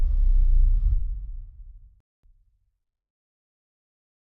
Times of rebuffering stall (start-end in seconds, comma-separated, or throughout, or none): 2.00-2.23